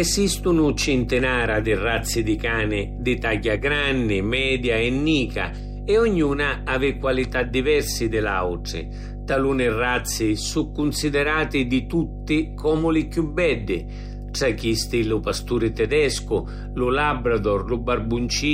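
A ground loop or a nearby transformer is letting the 50 Hz power line couple into the signal path, producing mains hum that runs through the whole speech recording. The result is a steady, low droning tone at 50 Hz with some low harmonics above it. The hum is loud, only about 10 dB below the speech, so it is plainly audible under every phrase and fills each pause with a constant buzz.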